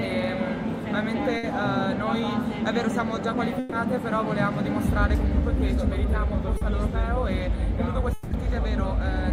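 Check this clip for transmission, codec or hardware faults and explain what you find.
Four network faults are audible, all from lost audio data.

Two bursts of packet loss occur at 1.37 to 1.45 s and 3.59 to 3.74 s. Each time, the receiver stretched the last sound to cover the hole, for 60 ms and then 130 ms, fading as it went. About 60 ms and 120 ms of real audio are skipped when playback resumes.

A short concealed packet loss sits at 6.57 to 6.63 s. About 40 ms never arrived in time. The decoder patched it by extending the preceding sound and blending back in. It comes across as a brief smear.

From 8.13 to 8.33 s, the sound turns into a fading continuation of what came before, lasting 180 ms, with no silence. Then it jumps ahead, with about 180 ms missing. This is likely a long network dropout.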